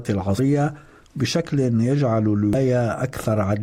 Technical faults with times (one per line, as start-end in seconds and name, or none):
0.37 damaged data in a compressed stream
2.53-2.55 damaged data in a compressed stream